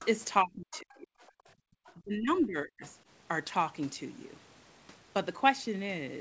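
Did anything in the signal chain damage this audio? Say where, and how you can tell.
Yes. The damage most likely comes from the call processing stage, specifically the acoustic echo canceller, and it shows up in three distinct ways.

Other side's voice leaking through: a second, quieter voice surfaces in brief scraps at 0.02 to 0.06 s, 0.72 to 0.96 s, 1.85 to 1.93 s and 2.82 to 2.86 s. It sits about 20 to 30 dB below the main talker. The likely cause is loudspeaker playback reaching the microphone with residual echo the canceller failed to subtract. It differs from crosstalk or bleed because it comes and goes in short fragments rather than running steadily underneath.

Speech suppressed in double talk: the main talker's level collapses from 0.42 to 1.19 s, by around 40 dB at its deepest, and again from 1.96 to 2.82 s, by about 35 dB. Each episode spans roughly 0.7 s. The leak fragments at 0.72 s and 2.82 s fall inside or right against these spans, so both sides were active at once. 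The canceller, probably unable to separate near talker from echo, attenuated everything. A codec dropout would cut cleanly and leave no overlapping far-end trace.

Background gated by the echo canceller: from 1.55 to 1.66 s, about a tenth of a second, the room tone itself drops by about 37 dB and then returns. The talker isn't what disappears here. The ambient floor is, and it is ducked hard while the loudspeaker plays. That pattern marks the canceller's suppressor clamping down, not a noise gate keyed on speech level.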